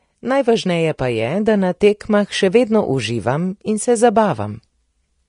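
Vorbis compression damage runs throughout this speech clip: nothing is present above 10.6 kHz, and the treble is hissy and grainy with softened consonant attacks, likely from Vorbis coding at a low setting, which fits roughly 35 kbps, quantising high-frequency detail into noise.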